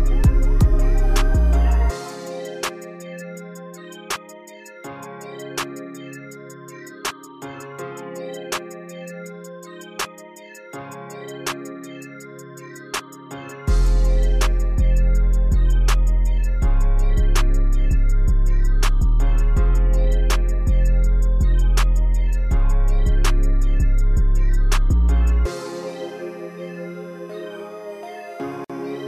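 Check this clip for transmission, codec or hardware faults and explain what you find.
There's one fault here, right near the end. At 28.64 to 28.70 s you get a gap at a join of encoded pieces: separately encoded sections were butted together untrimmed, so encoder delay and end-frame padding leave a roughly 52 ms hole with smeared edges before the sound resumes where it left off.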